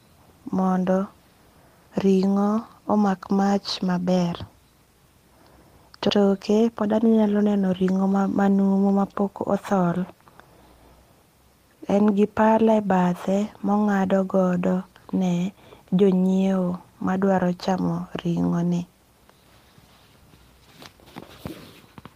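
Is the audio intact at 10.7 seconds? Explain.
Yes, at 10.7 seconds the speech plays through intact, with no dropout, click, distortion or other fault at that moment.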